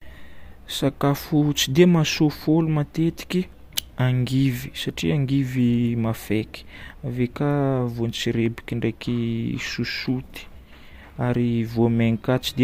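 Nothing goes wrong anywhere along the way here, so there's no fault to point to at any moment in this stretch of speech.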